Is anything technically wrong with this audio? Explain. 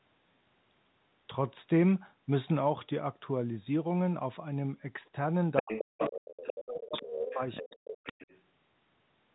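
Yes, there are two echo-cancellation problems in the second half of this speech clip.

From 5.56 to 6.12 s, 6.37 to 7.77 s and 8.04 to 8.41 s you get the other side's voice leaking through, likely speaker-to-mic echo the canceller didn't fully remove. It starts only slightly under the talker and fades to roughly 15 dB down.

Overlapping that, at 5.62 to 6.95 s, 7.11 to 7.41 s and 7.6 to 8.17 s, there's speech suppressed in double talk. The talker's voice gets ducked, likely because the canceller couldn't tell it from the echo. The first and last dips nearly cut it out, and the middle one drops about 20 dB.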